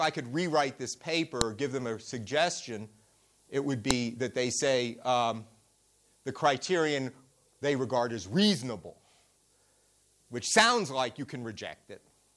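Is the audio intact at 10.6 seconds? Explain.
Yes, the audio is intact at 10.6 seconds, with no fault audible at that moment.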